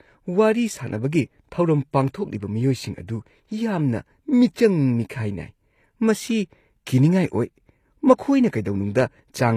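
Throughout the speech, s sounds turn gritty and lispy over a bright but synthetic-sounding treble, likely HE-AAC compression rebuilding the highs from copied lower bands, which fits roughly 24 kbps.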